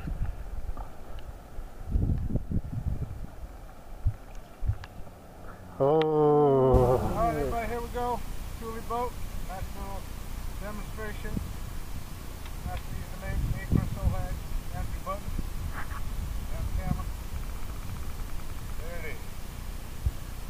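No dropouts, glitches, distortion or level problems turn up anywhere in the recording.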